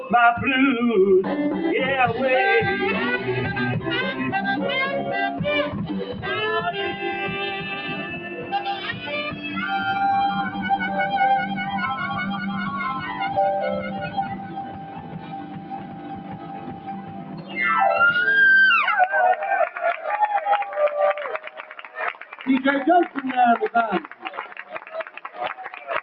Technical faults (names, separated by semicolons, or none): noise suppressor applied to music or sounds; sound cut by the noise suppressor